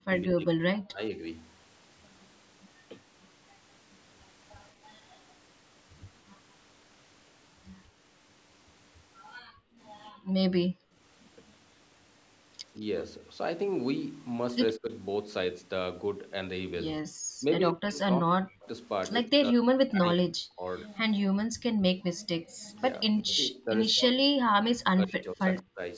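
From the start to 1.21 s the speech sinks and breaks up, falling by as much as about 40 dB for roughly a second in total. This is speech suppressed in double talk. The likely cause is both ends talking at once, so the echo canceller could not tell the near talker from the loudspeaker echo and turned everything down. Between 9.48 and 10.94 s the room sound dips hard, by about 34 dB, for around 0.7 s in total, before it comes back. This is background gated by the echo canceller, which clamped the microphone while the loudspeaker was playing. The speech dips again from 14.78 to 14.88 s, this time by about 15 dB. A brief gate of about 36 dB follows from 17.06 to 17.12 s. Long stretches of suppressed speech then run from 17.4 to 20.67 s, with about two seconds pulled down as far as about 40 dB. The background is gated again from 21.46 to 22.63 s, by about 35 dB. Inside that span the speech also drops from 21.82 to 22.02 s. 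The last stretch runs from 23.19 to 25.81 s, again with about two seconds of speech lost or sharply reduced. Throughout, the call microphone processing limits the band to nothing above 8 kHz.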